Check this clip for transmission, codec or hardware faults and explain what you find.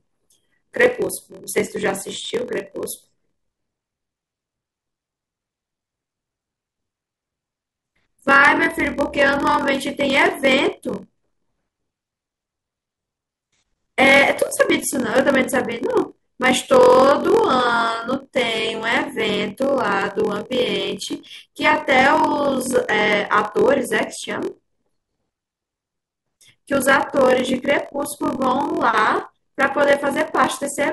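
Two faults are present in this speech recording: one runs through the entire clip, and the other is a single isolated event.

Block size mismatch (padded), throughout: one stage hands over shorter blocks than the next stage reads, and the missing part of each block is filled with silence. A brief gap therefore recurs every block, producing a steady buzz at about 43.1 Hz. That rate fits a 1024-sample read block. The speech also runs at 0.938 times normal speed, which fits a write block of about 960 samples. The timbre stays, so the result sounds stretched and buzzy.

Bit error spike, at 1.51 s: a single sample had one bit flipped, either in memory or on a digital link. Its value jumps by a power of two and snaps straight back on the next sample. The result is one sharp, broadband tick that has no relation to the surrounding speech. Because it lasts only one sample, it is over almost instantly.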